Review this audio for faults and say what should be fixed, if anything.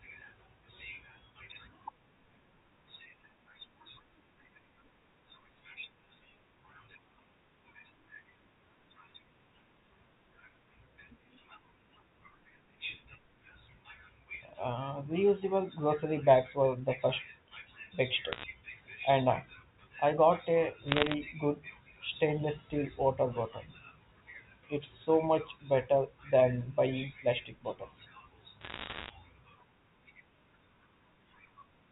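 Bit errors on a digital phone line cause three crackle bursts: 18.32–18.44 s, 20.88–21.14 s between "I got a" and "good stainless steel water", and 28.61–29.10 s after "than buying plastic bottles". Roughly 0.7 to 1 percent of bits flip, turning single G.711 samples into sharp ticks. Unlike packet loss, the speech underneath never drops out. Error-checked transport or a cleaner line would prevent it.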